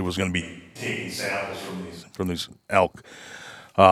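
From 0.42 s to 2.01 s the speech turns suddenly roomy and hollow, thinner in the bass and about 10 dB quieter, with faint room noise underneath, then snaps back. This is likely a switch to a distant microphone after the close one dropped out.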